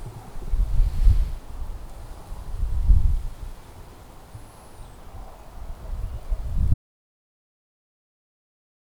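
The input was likely lost at 6.74 s, an audio dropout to silence: the recorder kept writing silence, so the sound cuts off abruptly into dead silence through the end.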